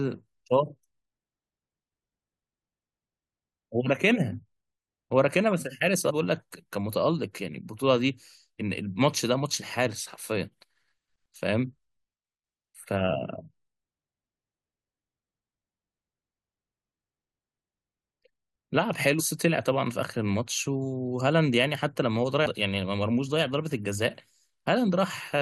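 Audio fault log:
6.09–6.11 s, 19.19–19.21 s and 22.45–22.47 s: damaged data in a compressed stream. Each event lasts about 20 ms. Corrupted bytes make the decoder misread frames and lose sync until the next frame header, which produces a brief glitch. A spectrogram and the waveform show a short disruption at each point.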